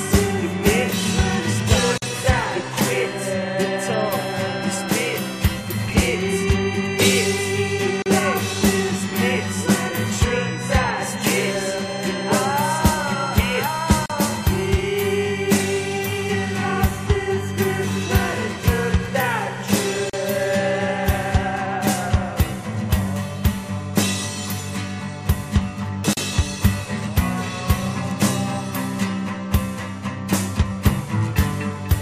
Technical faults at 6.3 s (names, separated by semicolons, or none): none